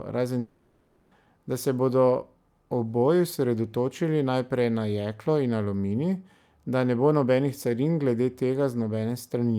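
From 0.39 to 1.13 s the speech gives way to a fading buzzy continuation before resuming at "da se"; likely a long network dropout, with about 0.72 s lost.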